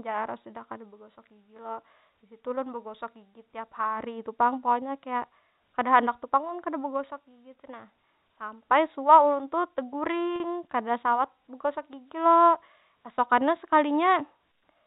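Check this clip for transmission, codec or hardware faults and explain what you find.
One transmission fault stands out in this telephone-band speech, which is capped at 4 kHz by its G.711 coding. Packet loss with pitch repetition occurs from 10.36 to 10.40 s, where about 40 ms of audio went missing, which fits two lost 20 ms packets. To bridge the gap, the receiver replayed the last pitch period it had received, over and over. Because the gap is so short, the result is a brief, slightly held, buzzy tone in place of the lost speech.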